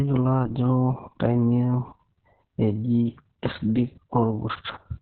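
Speech throughout carries heavy Opus voice compression: nothing above 4.3 kHz, a muffled, hoarse, slightly robotic narrowband sound that fits SILK coding at roughly 6 kbps.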